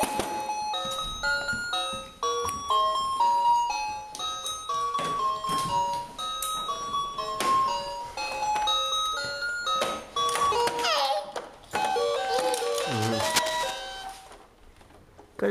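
Cable scratch noise runs from 12.94 to 13.79 s, a dense, ragged burst of scratching and rustling laid over the audio, sitting only around 5 dB below the sound itself and so clearly audible. The uneven, crackly texture points to a worn cable, connector or control being moved, its contact resistance fluctuating rapidly and injecting irregular noise, as the likely cause. The disturbance lasts under a second and then stops.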